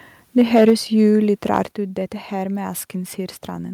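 It's a short speech clip with two rounds of clipping, each followed by a level drop. Microphone overload hits from 0.38 to 0.71 s, peaks pushed about 5 dB past the converter's limit, and again briefly at 1.56–1.58 s, about 1 dB over, just before "ut dette". The flattened tops give those syllables a crackly, gritty edge, likely from input gain set too hot for the converter. The microphone volume then steps down by about 3 dB at 0.7 s and by about 6 dB at 1.71 s, right before "ut dette". Voice and background both sink at once, which sounds like the call software likely reacting to the clipping by cutting the device's input level.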